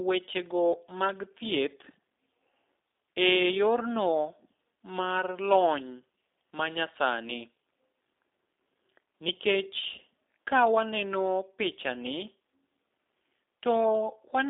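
From start to finish the speech has passed through a G.729 codec, the low-rate VoIP coder whose rebuilding of the signal fits 8 kbit/s. Rather than sending the waveform, it models each frame with a vocal tract filter, a pitch predictor and a few pulses, and keeps only a telephone band of about 250 Hz to 3.7 kHz. Everything above 3.7 kHz is gone, so the speech sounds narrow, and the coding damage is plainly audible as a rough, synthetic edge.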